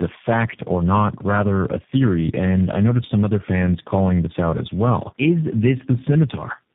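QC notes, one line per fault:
throughout, tandem speech coding: the speech sounds rough, muffled and warbly, with nothing above about 3.7 kHz. The call seems to have been decoded and re-encoded at each network border, with three speech coders in a row, consistent with an AMR-NB, CVSD and G.729A chain joined by G.711 links. Each coder models what the previous one already distorted, so the smearing and band-limiting stack up beyond what any single coder would cause.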